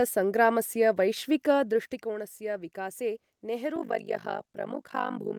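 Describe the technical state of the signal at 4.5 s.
Overlap-add ripple runs from 3.76 s to the end of the clip at 5.39 s, so 4.5 s falls inside it. The speech was split into windowed frames and rejoined with an overlap whose gains don't add up evenly, so the level dips and recovers once per frame, around 50 times a second. With swings of about 60 dB, the voice takes on a fast flutter or rough tremolo.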